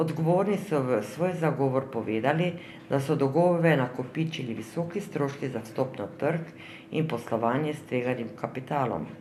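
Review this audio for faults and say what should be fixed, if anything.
No technical faults can be heard in the speech, so nothing needs fixing.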